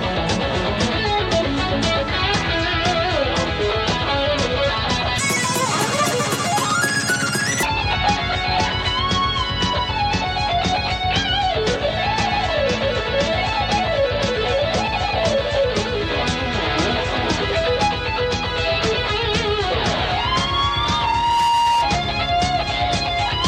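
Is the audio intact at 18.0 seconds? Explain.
Yes, the audio is intact at 18.0 seconds, with no dropout, click, distortion or other fault at that moment.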